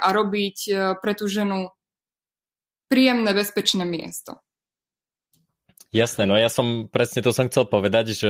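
From 3.72 s to about 6.67 s there's a call bitrate drop. The bandwidth estimate fell, so the encoder was squeezed onto far fewer bits and coded the speech more coarsely. For nearly 3 seconds it sounds rougher and grainier, which fits a drop from about 32 to 16 kbps.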